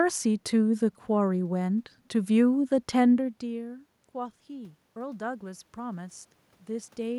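From 3.4 to 7.14 s, automatic gain rising. The input fell about 17 dB. Gain slowly lifts voice and room noise by about 6 dB.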